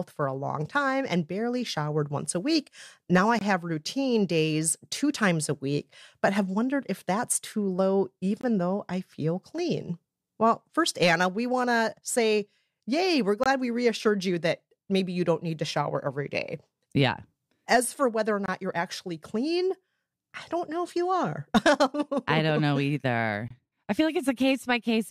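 At 3.39 s the speech stops dead for 23 ms, just before "have routine days two". This is a gap between chunks. The audio arrived in 5-second pieces, and silence was inserted at each join. No speech is lost, but the flow breaks. The same hole returns at 8.41 s, between "if that's too low" and "though I feel clean", and again at 13.44 s and 18.46 s. The last comes at 23.48 s, before "I feel like". Each is a brief dropout.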